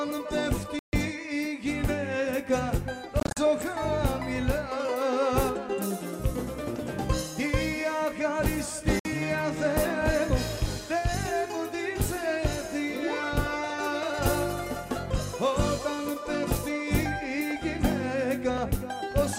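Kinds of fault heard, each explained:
Bluetooth dropout: the output goes silent briefly and resumes further along, as if playback continued unheard, likely from packets arriving too late. Gaps sit near 0.79 s (140 ms), 3.20 s (short holes spread over 168 ms, longest 42 ms) and 8.99 s (56 ms).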